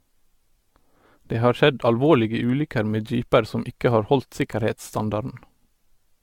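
From start to finish the speech sounds swirly, hollow and smeared, its attacks blurred beyond what a moderate AAC bitrate near 96 kbit/s explains. The likely cause is generation loss: around seven AAC-LC re-encodes, each requantising on a shifted frame grid, stacking noise and spectral holes.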